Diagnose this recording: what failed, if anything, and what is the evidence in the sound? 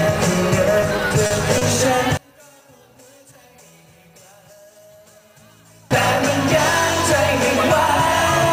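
Repeated stalls (stutter) at the network and jitter-buffer stage, between 0.81 and 1.63 s. Packets arrived late, the buffer ran dry five times, and each time the receiver extended the last sound until data resumed. About 120 ms was filled this way, with the longest gap about 40 ms, roughly 15% of that stretch. Nothing is actually lost, which separates it from packet-loss dropouts: the audio drags and hiccups rather than skipping ahead.

From 2.17 to 5.91 s the level collapses by about 31 dB and only a faint residue remains, then full level returns. The likely cause is one channel inverted in polarity, probably a swapped pair in the analogue wiring, with the two channels then summed to mono so their common content cancels. A plain gain drop or dropout would not leave this behind. Here the sound becomes faint rather than uniformly quieter or silent, because only the difference between the channels survives the sum.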